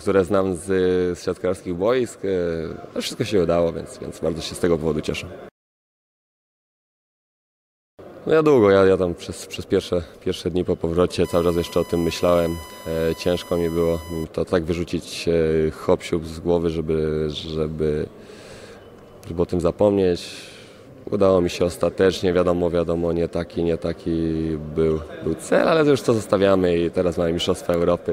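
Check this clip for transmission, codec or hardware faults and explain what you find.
One hardware fault is present: USB whine, from 11.24 to 14.24 s. The USB bus pulls current in 1 ms frames, and that load leaks into the audio path through shared power or ground. It adds a steady, fixed-pitch 1 kHz tone, roughly 20 dB below the sound, for those three seconds.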